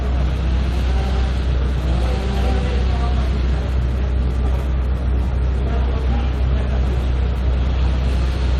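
No technical faults can be heard anywhere in this recording of sounds. The audio runs without any break, glitch or change in level that would point to a problem in how it was captured or passed along.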